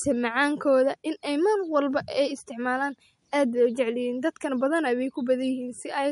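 Throughout the speech, nothing sounds above 11.2 kHz, and a watery, swirling smear is plainly audible. Likely MP3 compression, fitting a bitrate near 48 kbps.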